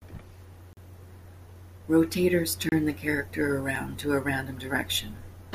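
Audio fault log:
0.73–0.77 s, 2.69–2.72 s, 3.76 s: block of digital silence. Three dropouts cut the speech to silence and back with no fade. The first lasts 40 ms, the second lasts 30 ms just before "the character", and the third lasts 4.4 ms between "the character" and "to a random". The longer two sound like short holes and the brief one like a tick. On the waveform each shows as a flat line. The spectrogram shows a blank vertical strip bounded by broadband streaks.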